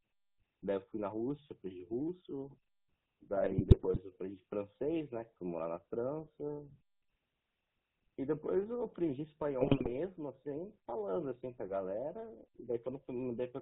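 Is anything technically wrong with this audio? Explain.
Yes. GSM full-rate codec coding runs throughout: it rebuilds the vocal tract from sparse pulse excitation, cutting everything above 4 kHz and leaving plainly audible buzzy, gravelly roughness.

GSM bit errors strike at 3.36–3.99 s and 9.60–9.91 s: corrupted filter, pitch and gain values distort frames, so the speech breaks into squawks, pops and gargling.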